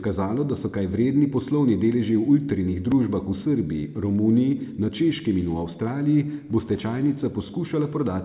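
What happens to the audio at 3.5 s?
Nothing goes wrong at 3.5 s; the speech carries on intact through that moment, with no dropout, click, distortion or other audible fault.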